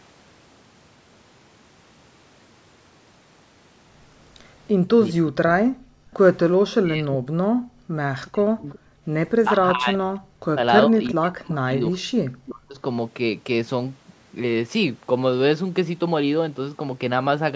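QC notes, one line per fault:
5.12–12.79 s, speech suppressed in double talk: the talker keeps dipping, going dull and breaking into pieces while the far side is also talking, adding up to roughly 4 s of damage across that stretch, with the worst dips very deep, somewhere around 40 dB. This is likely the echo canceller failing to tell the local voice apart from the loudspeaker echo, so it turns everything down together.
5.77–9.05 s, background gated by the echo canceller: the room tone underneath drops away in short holes, about a second in total, going down by about 40 dB at its deepest before popping back. That's the canceller clamping the mic hard while the loudspeaker is active and then releasing it, so the noise floor pumps instead of sitting steady.
6.13–6.17 s, 8.25–9.45 s and 11.04–12.48 s, echo leak: a faint delayed copy of the far side's voice creeps back in, first as a tiny scrap lagging by 384 ms, then longer runs at 368 ms and 342 ms. 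It starts well below the speech and gets a bit louder each time. It's likely residual echo from a speakerphone that the canceller didn't fully remove and that got sent back down the line.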